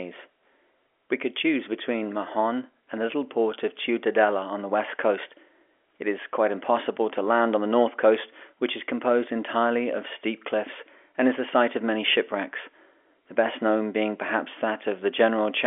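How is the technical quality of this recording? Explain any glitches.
No glitches to report here: the speech carries the usual narrow, phone-line character of G.711 telephone coding, with the sound held to the telephone band and nothing above 3.6 kHz.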